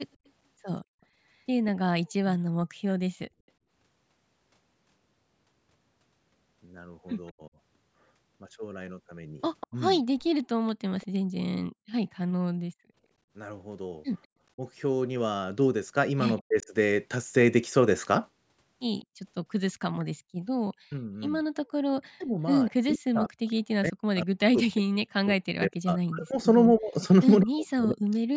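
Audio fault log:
1.99–2.4 s, 7.31–10.24 s, 14.55–16.69 s, 20.76–28.31 s: speech suppressed in double talk. With both sides talking, the echo canceller likely mistook the near talker for echo and turned it down. The voice drops by around 40 dB in short pieces, and for about five seconds in the final stretch.
2.68–2.81 s, 11.24–11.35 s, 21.62–21.69 s: background gated by the echo canceller. While the loudspeaker played, the canceller clamped the microphone, so the room sound falls away by about 38 to 40 dB for 70 to 150 ms, then returns.
9.6–11.07 s, 16.38–23.53 s: echo leak. The loudspeaker side's canceller likely let some of its microphone pickup through, so a delayed copy of the voice returns 196 ms late, roughly 20 to 25 dB below the speech.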